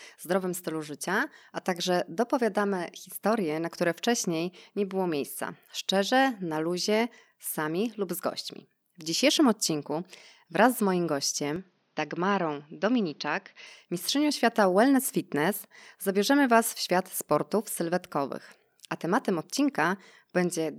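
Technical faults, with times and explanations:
11.56–13.67 s input switched to a poorer device: speech abruptly dulls, nothing above 6.6 kHz, slightly quieter with faint new background noise, likely a lower-grade microphone taking over.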